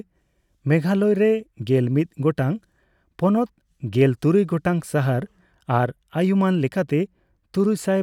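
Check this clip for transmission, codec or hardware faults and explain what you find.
Nothing here points to a transmission, codec or hardware problem; the speech comes through without any fault to report.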